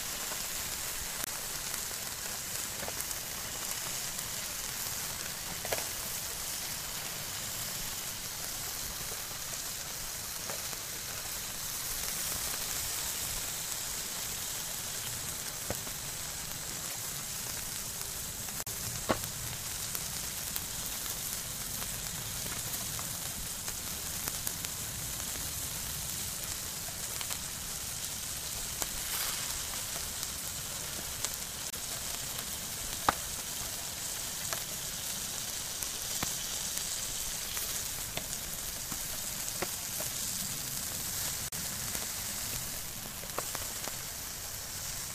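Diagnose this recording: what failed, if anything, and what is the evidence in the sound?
Broken MP3 bit reservoir, likely, at 1.24, 16.89, 18.61, 30.37, 31.70 and 41.47 s. This is a codec-stage fault. At each point the sound jumps forward and a short disturbance of about 44 to 70 ms follows, roughly two to three frames of about 26 ms each. Frames seem to have been dropped. The next frames then reach back into the reservoir for borrowed bits and decode another frame's bytes, so the result is a chirp, noise burst or gap.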